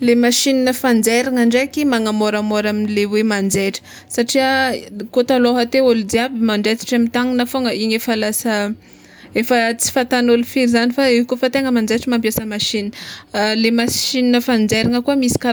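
Listening to the speech here, nothing stood out as a technical fault at any point.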